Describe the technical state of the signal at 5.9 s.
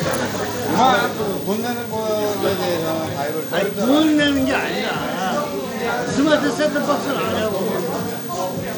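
At 5.9 s the sound is passing through what is likely Bluetooth SBC compression, and this persists for the whole clip rather than starting at that moment. The codec splits the signal into a few wide sub-bands and allocates bits without modelling hearing. Its data rate is tight enough to suggest about 96 kbps, so the upper bands are starved and the rest are coarsely quantised. The result is plainly audible: flickering, unstable treble with a gritty, aliased haze over the sound. The spectrum stops at 20.4 kHz.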